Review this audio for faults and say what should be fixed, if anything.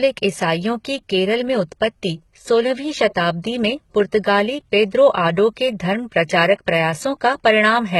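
Throughout the clip, the speech's treble reaches 20.5 kHz yet sounds synthetic, with s sounds gritty, metallic or lispy. The likely cause is heavy HE-AAC compression: spectral band replication copies lower bands upward under a coarse envelope, so harmonics misalign across the crossover, which fits a bitrate around 16 kbps. To prevent it, encode at a higher bitrate, or use plain AAC or a lossless format.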